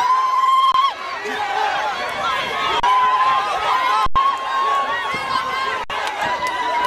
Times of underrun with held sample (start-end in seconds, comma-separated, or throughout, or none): 0.72-0.74, 2.80-2.83, 4.06-4.16, 5.84-5.90